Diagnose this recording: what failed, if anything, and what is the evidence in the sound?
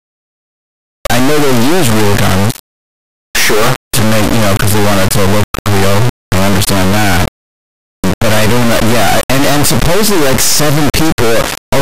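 The failure is at the sample-format conversion stage: an integer read as float error, with 32-bit integer samples interpreted as 32-bit float. Throughout the clip, the speech becomes an extremely loud, buzzing square wave that drops to silence in the quietest passages. Most integer bit patterns decode to values either near zero or far beyond full scale, so the output jumps between nothing and the clipping rails. A byte-order swap would instead sound like dense, hiss-like noise, not this hard on-off buzz.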